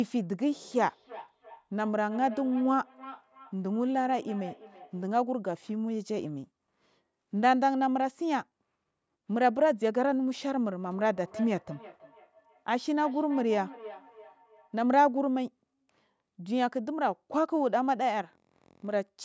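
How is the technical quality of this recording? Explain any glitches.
The recording has one recurring problem: feedback echo between two devices, heard from 0.55 to 5.12 s and again from 10.9 to 14.77 s. Each stretch of speech comes back roughly a third of a second later, thinner and ringing, at about 17 dB and 16 dB below the voice. A second device in the room is playing back this microphone's signal, which the microphone picks up again. Its echo canceller removes only its own device's playback, so the loop persists.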